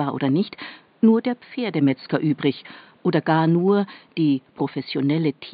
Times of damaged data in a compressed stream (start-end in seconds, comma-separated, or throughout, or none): none